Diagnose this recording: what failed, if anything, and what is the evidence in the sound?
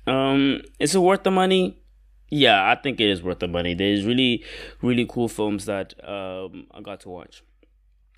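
Nothing in this speech recording stood out as a fault on careful listening, so there is no failed stage to point to.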